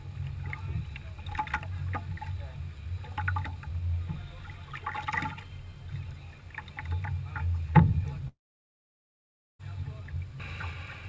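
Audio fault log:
8.28 to 9.61 s, long network dropout: the sound turns into a brief fading buzz, then goes almost silent for about 1.24 s before returning at 9.61 s with roughly 1.3 s simply gone. That's most likely packets failing to arrive on the call. The receiver stretches the last sound it got, gives up after a moment, and picks up again later without the lost part. The call codec's 8 kHz top end holds on either side of the gap.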